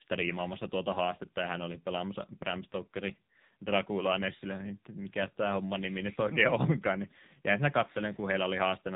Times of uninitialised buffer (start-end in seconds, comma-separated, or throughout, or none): none